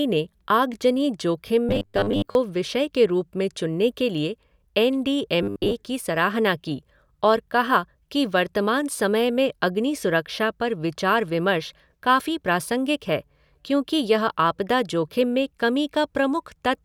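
Robotic sound from repeated short buffers hits at 1.69–2.35 s, after "ने आगजनी जोखिम", and at 5.43–5.74 s, after "के लिए एन डी". The speech collapses into a metallic 100 Hz buzz, likely from 10 ms buffers replayed to cover late audio. Roughly half, then most, of the audio is repeated. The spectrogram shows rigid harmonics stacked every 100 Hz, and the waveform shows identical cycles.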